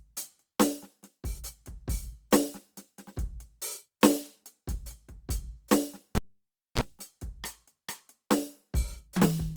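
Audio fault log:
6.15–6.81 s, cable pulled and plugged in: a pop, then 0.61 s of near silence, a 32 ms burst of 60 Hz mains buzz as the plug tip touches, another pop. Waveform: two spikes around a flat gap. Spectrogram: brief 60 Hz harmonic stack.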